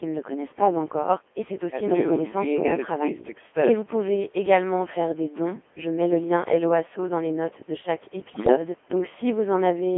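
Robotic, buzzy speech runs through the whole clip, thin and boxed into a narrow band of roughly 250 Hz to 3.4 kHz. That is the Codec 2 vocoder at 2.4 kbit/s, heavily degrading the signal. Only pitch, voicing, energy and a coarse spectral envelope survive the link, and the decoder rebuilds the voice from sine waves. The original waveform is gone, leaving a synthetic, mechanical timbre rather than natural speech. From 8.30 to 8.56 s the voice suddenly breaks into warbling, bleepy gibberish, with abrupt jumps in pitch, loudness and tone colour. These are bit errors on digital voice radio. A bit error rate of around seven percent corrupts the parameters of about ten frames, so each damaged frame is synthesised with the wrong pitch, level, voicing or spectral shape. The call microphone processing in the chain removes the lowest bass, which is normal.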